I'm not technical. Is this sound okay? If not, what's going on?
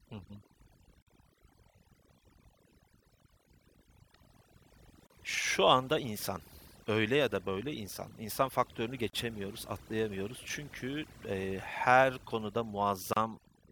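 No. Two separate problems are audible.

The first runs through the whole recording: overdone noise removal. A cleanup tool was set too aggressively. It shuts off any slice of the sound that looks like background hiss, and the quiet parts of the speech get cut along with it. The pauses drop and break up into twinkling specks.

The second is a gap at a join of encoded pieces. The audio was saved as separate chunks, each about 4 seconds long, and stitched together without trimming the bit of silence each chunk carries at its edges. The result is a brief hole in the sound at 1.02 s (about 46 milliseconds), and again at 5.07 s, 9.10 s and 13.13 s (32 milliseconds each). The last one comes right after "eee her konuda". Each gap has blurred edges, and the speech resumes exactly where it stopped.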